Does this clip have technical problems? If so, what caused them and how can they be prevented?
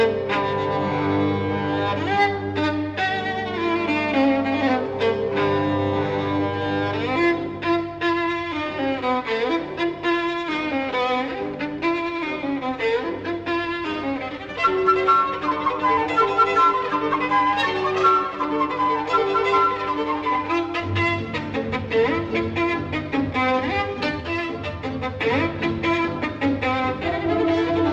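Yes. From 24.20 to 25.20 s there is channel delay (comb filtering). One channel lags the other by roughly 10 ms, and summing them to mono cancels evenly spaced frequencies from around 40 Hz upward, so the sound turns hollow. A spectrogram shows regularly spaced dark horizontal stripes across that second. Prevent it by checking inter-channel alignment and mono compatibility before summing, and correcting any channel offset.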